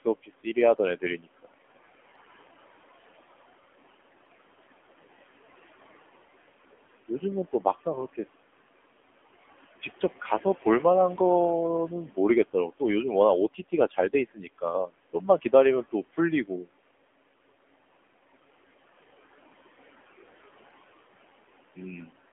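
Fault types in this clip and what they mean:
noise suppressor artifacts: background sinks between phrases and rises beneath them; a suppressor is pulling steady noise down by about 16 dB frame by frame.
AMR narrowband mobile codec: buzzy, synthetic speech with nothing above 3.4 kHz or below 250 Hz, the plainly audible damage of AMR-NB running at 7.4 kbps.
speech cut by the noise suppressor: brief swallowed, faint stretches at 0.23–0.57 s and 14.34–14.63 s, dropping up to about 12 dB, where the suppressor mistook speech for noise.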